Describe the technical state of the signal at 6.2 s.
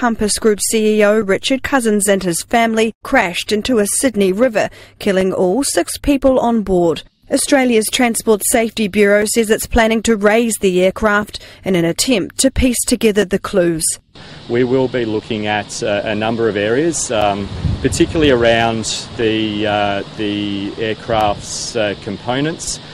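Periodic USB or driver dropouts run from 1.22 to 21.21 s: every 2.0 s a few milliseconds vanish into silence, heard as regular ticks over the signal.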